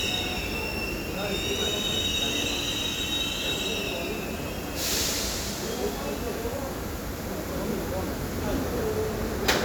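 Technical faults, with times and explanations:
2.44–2.46 s loud pop: one sharp thump about 10 dB above the sound, likely from a voltage spike; a tall waveform spike and a vertical spectrogram stripe.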